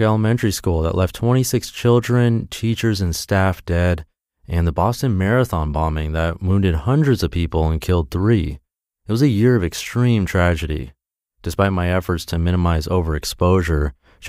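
No technical faults turn up anywhere in this recording of speech, so there's nothing to point to along the way.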